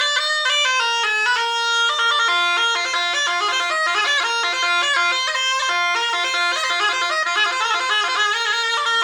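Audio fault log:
No faults are present in the clip. Nothing in the audio calls for a timed entry in this log.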